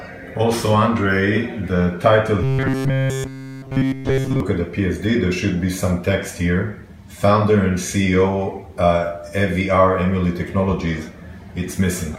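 Robotic sound from repeated short buffers, 2.44 to 4.40 s: metallic 133 Hz buzz throughout, likely a 7.5 ms buffer looping while audio is skipped.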